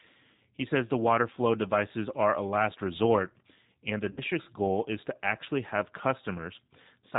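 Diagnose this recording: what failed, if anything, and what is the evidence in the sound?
The codec stage shows plainly audible G.729 codec damage across the whole speech track. Nothing is heard above 4 kHz. The voice sounds rough and slightly synthetic, which fits an 8 kbit/s G.729A coder. The voice is rebuilt from a vocal tract filter, pitch predictor and sparse pulses.

The network stage shows VoIP packet loss concealed by the speech codec from 4.11 to 4.22 s, between "last resort and the" and "goal is to actually". The voice is stretched out and fades. About 60 ms is missing, which fits three lost packets. The decoder extended its last pitch and filter, then the voice stayed weak or distorted for tens of milliseconds or more afterwards.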